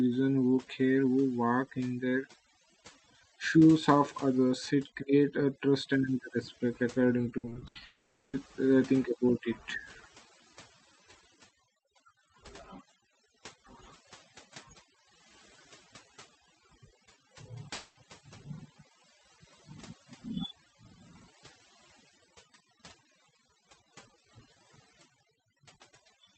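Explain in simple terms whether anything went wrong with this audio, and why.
Overdone noise removal runs through the whole speech clip. The noise filter was set too aggressively, so it mutes narrow frequency bands it mistakes for background noise, taking quiet parts of speech with them. The result is a background that drops away and breaks up into twinkling, warbling specks.

From 7.37 to 7.77 s there is repeated packet loss, which gives a robotic sound. Six short gaps, the longest 80 ms, hit in quick succession, and about half that stretch is patched by stretching out the last sound. It comes out choppy, with fragments missing.

From 7.85 to 8.35 s, and again from 17.73 to 17.97 s, the sound is replaced by a smeared continuation of what came just before, and then normal audio resumes with that part lost. The likely cause is a long network dropout, where nothing arrived for those spans and the receiver filled the hole itself.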